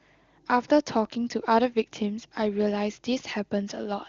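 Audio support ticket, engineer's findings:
Findings: no faults found in this speech clip; the AMR-WB wideband path sounds consistent with one of its higher rates.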